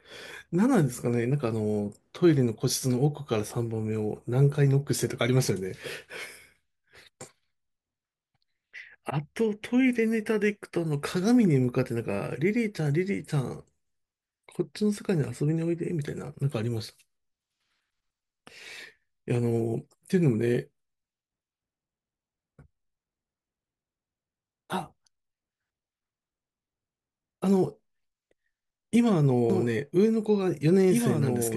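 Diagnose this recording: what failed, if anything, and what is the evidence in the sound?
A doubled audio track starts abruptly at 29.50 s and runs to the end. A dry, full-band copy of the speech trails by about two seconds, around 5 dB quieter. The likely cause is an edit at the storage stage holding two misaligned copies.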